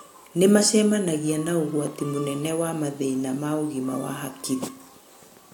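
A short recording of speech, with no technical fault to report. There is nothing here that calls for a time or a cause.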